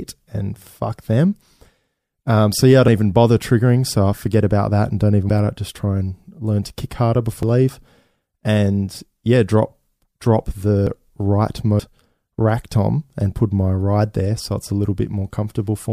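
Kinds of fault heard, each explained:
Dropped buffer (overrun): at three points the speech skips ahead, likely because samples were overwritten unread; unlike a dropout, nothing goes silent.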